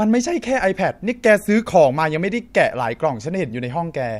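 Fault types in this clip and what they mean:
No technical fault can be heard anywhere in this speech recording. There is nothing to list for it.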